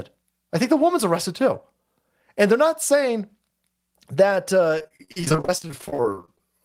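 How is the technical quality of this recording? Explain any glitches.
The recording is let down near the end by repeated packet loss (robotic sound). From 4.78 to 6.44 s, 35 short gaps, up to 38 ms each, are patched by repeating preceding sound. The speech turns choppy, with smeared, repeated blocks on a spectrogram.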